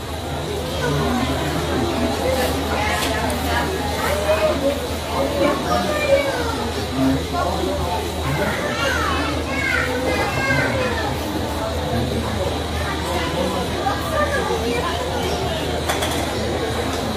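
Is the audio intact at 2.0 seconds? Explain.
Yes, the audio is intact at 2.0 seconds, with no fault of any kind at that point.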